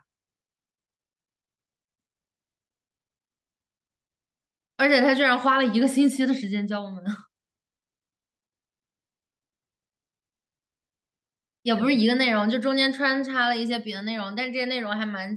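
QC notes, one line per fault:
No faults heard.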